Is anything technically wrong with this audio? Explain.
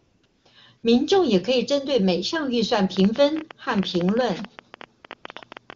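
Yes, there are two kinds of fault in this speech clip.

AMR comfort noise appears at 0.00–0.23 s, 0.25–0.45 s, 0.77–0.83 s, 4.99–5.03 s, 5.07–5.09 s and 5.15–5.23 s. In each, the real background gives way to a smooth, steady hiss that switches in and out abruptly. The sending phone judged the talker silent and stopped transmitting speech frames, so the receiver synthesised filler noise from a rough level and spectrum description.

A train of clicks runs from 2.97 s to 5.74 s: about thirty sharp ticks, roughly 10 dB above the speech, arriving unevenly at about 11 per second and audible through pauses as well. They are likely from electrical interference or a faulty connection or power supply.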